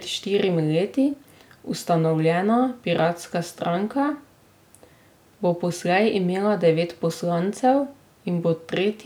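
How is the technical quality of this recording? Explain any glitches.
No glitches can be heard anywhere in the recording, and the signal stays technically sound throughout.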